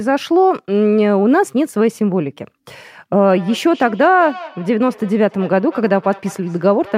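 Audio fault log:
3.22–6.98 s, feedback echo between two devices: the speech comes back roughly every fifth of a second, peaking about 19 dB down, as a second device replays it into the mic.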